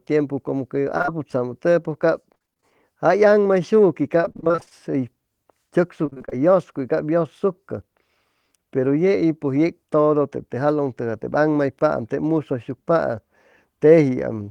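At 0.97, 1.02 and 1.06 s, three short concealed packet losses follow back to back, each losing about 20 ms. The decoder extends the preceding sound to cover each hole, giving a brief smear up to 1.10 s. A spectrogram shows smoothed, repeated harmonics with no fresh onsets.

Repeated packet loss with a robotic sound then hits 2.34 to 2.64 s, 4.22 to 4.72 s and 6.06 to 6.33 s. Roughly half of each stretch is concealed, with gaps up to 33 ms, so the audio turns choppy, with pieces missing. The waveform shows copied cycles, and a spectrogram shows striped, blurred bands.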